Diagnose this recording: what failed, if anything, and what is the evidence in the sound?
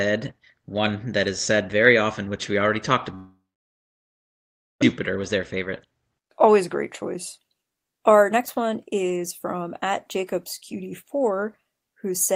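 Right after "which we already talked", at 3.15 s, the speech breaks off: the last sound is stretched into a fading buzz, then about 1.4 s of near-silence until 4.84 s, and the lost stretch never returns. The sound points to a network stage, likely a long network dropout, where the receiver concealed missing packets until it gave up, then resumed further on with the gap discarded.

From 5.10 s to 11.32 s the speech runs about 10% fast at unchanged pitch, sounding hurried. This is a jitter buffer speed-up: the buffer had built up roughly 0.7 s of excess delay after the outage, so the receiver drained it by repeatedly cutting short pitch-period slices, on the Opus call path whose 12 kHz band limit applies throughout.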